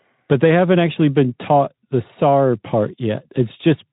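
Speech recording with no technical faults to report.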